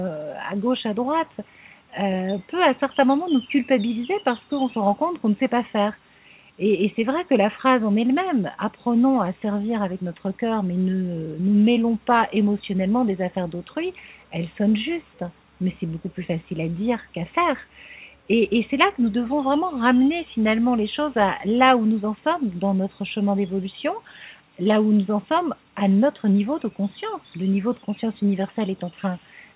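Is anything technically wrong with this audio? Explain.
No, nothing is technically wrong: the sound has the narrow telephone band of a working call path, with no content above 4 kHz, which fits a 64 kbps G.711 mu-law codec.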